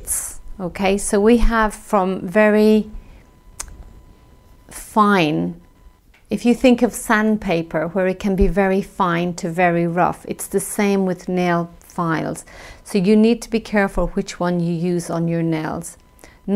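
Computer activity noise runs throughout: a faint buzzing chirp pulsing at around 1 kHz, roughly 40 dB below the sound, as changing computer load disturbs the audio circuit's shared ground. A spectrogram shows a thin line near 1 kHz with stacked harmonics, independent of the sound.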